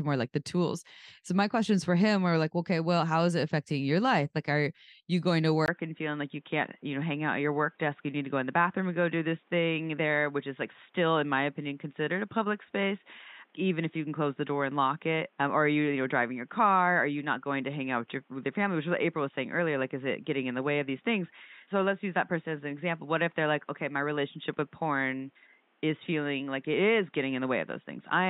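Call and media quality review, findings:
Speech turns dull and boxy from 5.66 s, just after "are you going to", through the end. Nothing above 3.8 kHz, 20 ms gap at the switch, new faint noise floor, no level jump. Likely input switched to a poorer device. The gap and the changed noise floor set this apart from a plain codec bandwidth drop.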